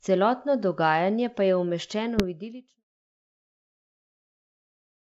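Between 2.17 and 2.25 s, right before "v idilično pokrajino in", there's a short rough burst with pops and a brief level wobble: bit errors on an ADPCM link. The flipped bits knock the decoder's step size and predictor off, so each hit rings on for milliseconds, even at what sounds like a fraction-of-a-percent error rate on this clean 64 kbit/s G.722 path.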